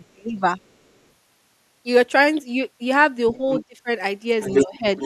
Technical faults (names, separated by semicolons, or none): speech suppressed in double talk; other side's voice leaking through